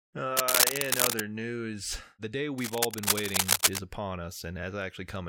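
Cable scratch noise runs from 0.37 to 1.20 s, before "news the day", and again from 2.58 to 3.79 s, after it. The dense, uneven rustling sits somewhat above the speech, likely from a worn cable or connector being moved. On a spectrogram it shows as ragged broadband smears, and on the waveform as jagged bursts.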